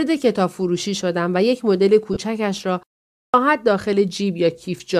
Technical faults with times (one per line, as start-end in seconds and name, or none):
2.13-2.17 lost LE Audio frames
2.83-2.92 digital wireless dropout
3.14-3.34 clipped start after a pause